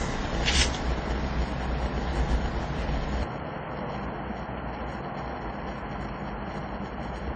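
A short recording of everyday sounds, and it carries a steady block size mismatch (padded) the whole way through. One stage is handing over shorter blocks than the next one reads, and the leftover in each block is zero-filled, so a tiny gap lands in every block. You hear that as a 100 Hz buzz riding under everything, and the audio plays slower, at about 0.92 times normal speed, while the timbre stays the same. On top of that, the top end stops dead at 9.3 kHz, and there's a mix of different compression artefacts layered together. That's likely transcoding between lossy codecs, with the sound passing through something like MP3, then Opus, then HE-AAC at low bitrates of 32, 48 and 32 kbit/s. Each pass spends bits re-encoding the previous one's junk and adds its own, and the lowest cut-off in the chain wins. Then at 3.23 s the character changes abruptly and stays that way to the end, with no dropout at the switch. 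The band narrows, the sound goes boxy and dull, the level falls by around 5 dB, and a new noise floor appears, sitting roughly 35 dB under the signal. That's the likely result of an input switched to a poorer device, such as a headset's call profile or a cheaper mic, with its own narrow band, tone and hiss.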